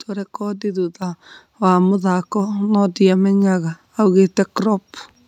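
At 1.02 s, just before "wa mũthako no", the speech and the background noise under it jump up together by about 6 dB in a single step. That is the microphone volume stepped up: the call software judged the input too quiet and raised the device level.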